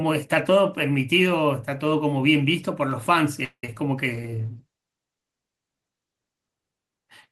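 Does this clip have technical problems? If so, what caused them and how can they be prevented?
Yes. From 3.44 to 3.64 s there is a call audio freeze, likely from packets stalling in transit until the jitter buffer emptied. The receiver stretched the last sound into a fading buzz that ends in about 80 ms of silence, then resumed where it left off, adding roughly 186 ms of delay without losing audio. A deeper or adaptive jitter buffer on a steadier network path prevents this.

Short concealed packet loss follows at 3.66 to 3.69 s and 3.75 to 3.77 s: about 10 ms of audio each time failed to reach the decoder in time, so the receiver extrapolated the preceding sound and blended back, leaving brief smears or wobbles. Forward error correction or redundancy in the stream prevents this.

A call bitrate drop runs from 4.13 to 6.61 s: the bandwidth estimate fell and the encoder went from 32 to 16 kbps, holding the lower rate for about 2.4 s, so the sound becomes coarser and duller until it recovers. 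More stable bandwidth and a higher minimum bitrate prevent this.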